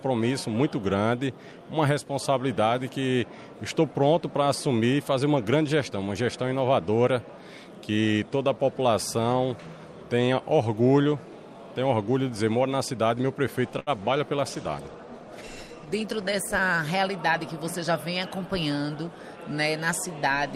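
At 13.79 s the sound briefly hangs: for about a tenth of a second, up to 13.90 s, the last moment is held and stretched with a faint buzzy sameness before it moves on from exactly where it left off. This is a short stall from a late packet. The jitter buffer ran dry when a packet failed to arrive on time, so the receiver filled 74 ms by extending what it already had. Nothing was skipped, but playback now sits 74 ms later than before.

From 14.51 s the audio loses its clarity. It turns coarse and somewhat watery, the top end dulls as high frequencies fall away, and the muffling is deepest for roughly 1.4 s before clarity returns by 17.15 s. This is a call bitrate drop. The bandwidth estimate fell, and the encoder was forced into a much smaller bit budget, which fits a step down from about 48 to 16 kbps. At that rate it quantises more crudely and trims the upper band.

Overlapping the end of that stretch, from 16.62 to 17.31 s, the sound runs slightly quick, about 105% of normal pace, yet its pitch stays put, so the timing feels a touch hurried. 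This is a jitter buffer speed-up. The buffer held more audio than its target, so the receiver shaved out a series of tiny pitch-period slices, a few tens of milliseconds in all, to pull the delay back down.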